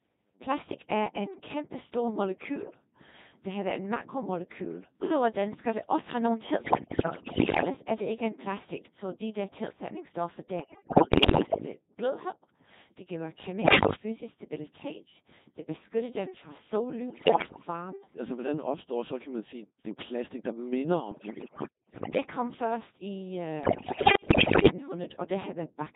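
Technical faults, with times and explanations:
Throughout: Codec 2 vocoder. The speech is carried at about 2.4 kbit/s, which keeps only pitch, voicing, energy and a coarse spectral envelope per frame, and the decoder rebuilds the voice from sine waves. The damage is heavy: the speech sounds robotic and buzzy, with a smeared, synthetic timbre. On a spectrogram the harmonics look unnaturally regular and the formants blurred, and the waveform no longer resembles the original shape.
6.64–7.70 s, 10.60–11.66 s, 13.62–13.96 s, 17.08–17.68 s, 21.12–22.18 s, 23.64–24.70 s: bit errors on digital voice radio. Flipped bits corrupt frame parameters, so the synthetic voice jumps in pitch, level and tone colour, turning into bleeps, warbles and gibberish. Landmarks include after "det også have nogle" before "er det ikke en", after "de der tilsætningsstoffer", and between "det giver" and "fysisk stabilitet". 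The error rate is about 15%, and roughly double that in the last burst, which is the most garbled. On a spectrogram, harmonic stacks leap erratically and the energy blocks change abruptly from frame to frame.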